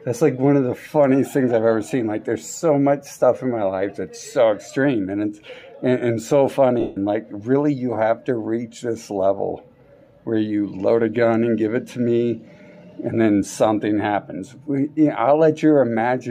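Lost LE Audio frames break the sound from 6.80 to 6.97 s, a 165 ms gap that fits about 22 frames at 7.5 ms each. The LC3 decoder covers the hole by repeating the last good spectrum with randomised phase signs and turning it down after the first few frames. Any tone becomes a hissy smear that fades toward silence. On a spectrogram the harmonic lines dissolve into a blurred band that dims across the gap. The waveform envelope sags there. Light lossy compression is also present, with at most a faint watery texture on noise and attacks.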